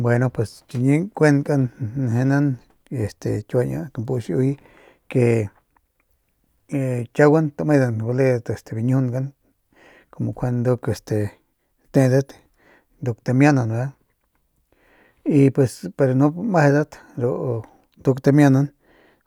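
A speech recording, with nothing technically wrong with it.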